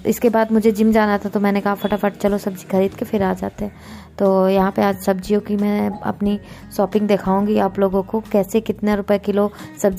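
No technical faults can be heard anywhere in this clip.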